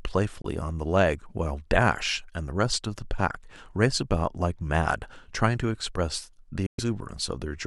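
Right near the start, from about 0.42 to 0.46 s, the speech cuts to silence for roughly 23 ms, then again from 6.66 to 6.80 s for about 116 ms. Both look like a Bluetooth dropout, likely packets arriving too late for the headphones and getting dropped. When the speech comes back it has moved on, as though it kept playing underneath. The longer hole fits several packets lost in a row.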